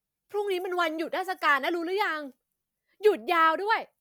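Nothing goes wrong anywhere in this bit of speech, so there's no technical fault to point out.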